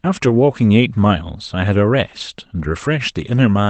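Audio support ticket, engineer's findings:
Lost packet rebuilt from error correction at 2.59–2.61 s: one 20 ms stretch turns briefly rougher and noisier, no gap. Opus in-band FEC: the next packet carried a lower-bitrate backup of the lost one, and the decoder played that instead over the Opus call path.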